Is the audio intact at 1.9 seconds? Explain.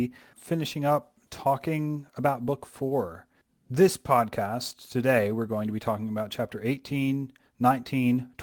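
Yes, at 1.9 seconds the speech plays through cleanly, with no dropout, click, distortion or other audible fault at that moment.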